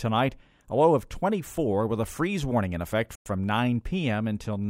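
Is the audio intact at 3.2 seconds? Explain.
No. Just after "freeze warning in effect", the sound drops to silence from 3.15 to 3.26 s, a gap of about 107 ms, and then resumes. This is a Bluetooth stall, likely caused by interference delaying packets until the headphones' buffer ran empty and playback paused while resent data arrived. On a waveform it appears as a flat gap between sharp edges; on a spectrogram, as a blank vertical band across all frequencies.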